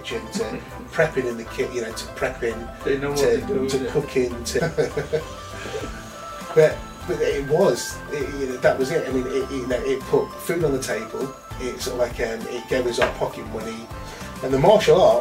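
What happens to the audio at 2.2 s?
Nothing goes wrong at 2.2 s; the audio plays through that moment intact, with no dropout, click, glitch or other fault to be heard.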